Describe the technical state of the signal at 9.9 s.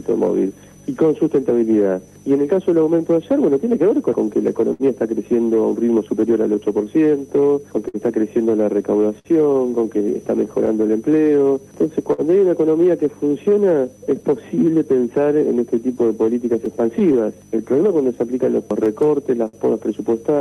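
At 9.9 s the signal is affected by clock drift between sender and receiver, which runs through the whole clip. The sender's clock runs about five percent slower than the receiver's, so the jitter buffer keeps draining and the receiver must keep stretching what it has. This is heard as a faint, steady unevenness in pacing rather than as isolated damage. Unlike a single dropout, it never stops and has no one location.

The drift shows up as repeated timing corrections from 0.05 s to 19.45 s, so 9.9 s falls inside them. The receiver repeats short pieces to avoid running dry, which plays the stretch at 97% speed and adds about half a second overall. Every edit pushes the same way, lengthening, at uneven spacing, so the tempo sounds slightly unsteady. This sets it apart from random packet loss, whose repairs have no consistent direction.

The moment also falls within scattered short gaps, which run from 4.73 s to 12.21 s. 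Around seven packets were lost or late across that span, the longest hole being roughly 70 ms. The receiver bridged each one by continuing the preceding sound, leaving a brief tick, smear or hiccup. These are discrete blemishes at separate points, unlike the continuous tempo drift of the timing corrections. The Opus call path beneath them caps the bandwidth at 12 kHz.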